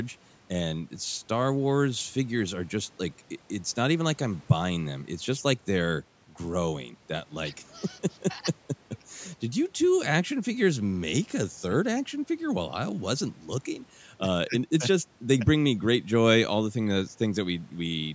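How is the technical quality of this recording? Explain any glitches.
The technical quality of this recording is sound, with no glitches to explain.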